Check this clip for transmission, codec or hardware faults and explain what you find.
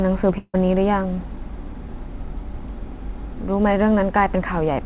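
One transmission fault is audible, over a narrowband path with nothing above 4 kHz. From 0.38 to 0.56 s there is a long network dropout, likely lost packets. The last sound fades as a buzz or hiss into brief silence. About 160 ms is lost.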